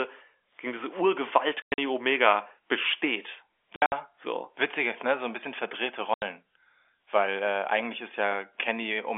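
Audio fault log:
1.62–1.78 s: packet loss filled with silence, about 140 ms of dropouts scattered over 160 ms, longest hole 100 ms, hard-edged gaps where packets vanished.
3.76–3.92 s: packet loss filled with silence, about 120 ms missing across 160 ms, longest run 60 ms, the receiver inserting silence with abrupt edges.
6.14–6.22 s: packet loss filled with silence, one 80 ms hole right after "ein bisschen verdrehte", consistent with four 20 ms packets dropped and replaced by silence.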